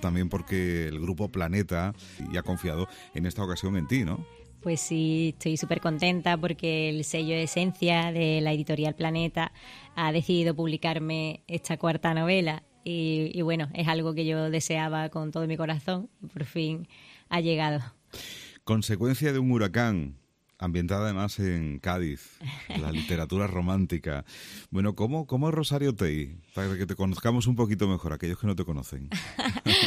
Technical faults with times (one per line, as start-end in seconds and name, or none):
none